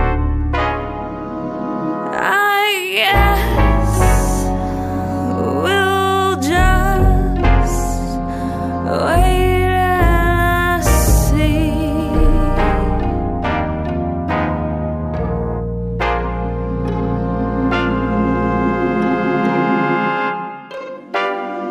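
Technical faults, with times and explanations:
No technical fault can be heard anywhere in the audio. There is nothing here that needs a time or an explanation.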